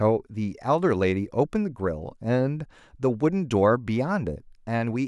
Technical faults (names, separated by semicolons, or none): none